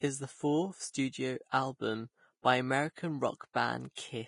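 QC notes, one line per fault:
Throughout: Vorbis compression. The speech sounds hissy and grainy, and consonant attacks are blurred. Nothing remains above about 10.6 kHz. The likely cause is a low-quality Vorbis encode, which fits a bitrate near 30 kbps. Its coarse treble quantisation swaps fine detail for noise.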